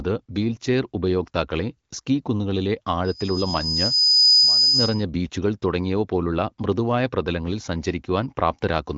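Loudspeaker feedback squeal runs from 3.05 to 5.04 s in this speech clip, starting just after "വീൽചെയർ ഉപയോക്താക്കളെ സ്കീ കുന്നുകളിലെ" and ending before "ബീച്ചുകൾ തുടങ്ങിയവ പോലുള്ള മൃദുവായ". A microphone re-amplified its own loudspeaker until the loop gain passed one at 5 kHz, so that tone swells over about a second and a half to roughly 10 dB above the speech. The band-limited sound, with nothing above 7.6 kHz and only light coding damage, fits a wideband HD Voice path.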